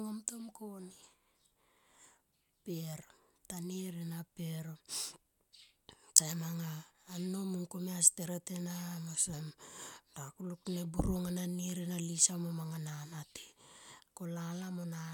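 Nothing stood out on listening to this speech recording.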